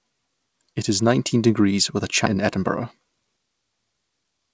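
At 2.26 to 2.28 s the speech skips ahead. Roughly 0.7 s of audio was dropped while later audio was already waiting. Nothing fills the gap. The two sides join almost directly, so a chunk of speech simply vanishes.

From 2.35 to 3.28 s there is a jitter buffer speed-up. The buffer held too much audio. The receiver trimmed tiny pitch-period slices to catch up. Speech runs about 7% fast at unchanged pitch. It sounds slightly hurried. From 4.10 s to the end it happens again, faster, at about 13%.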